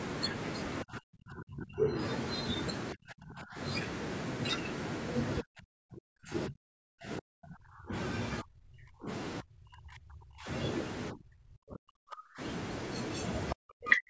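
Speech repeatedly dips by up to about 40 dB or breaks up in pieces at 0.83–1.98, 2.94–3.59, 5.41–7.93, 8.42–9.09, 9.41–10.48, 11.11–12.41 and 13.53–14.09 s. This is likely speech suppressed in double talk, where the echo canceller turned the talker down along with the loudspeaker echo.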